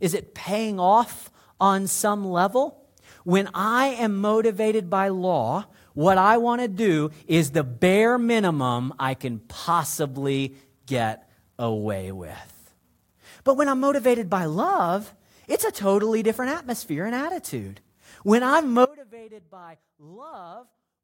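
At 18.85 s the speech drops out abruptly and stays out to the end of the clip, an audio dropout to a faint residue. Only a faint leak remains, roughly 25 dB below normal level, likely from signal loss upstream while the downstream path stayed live.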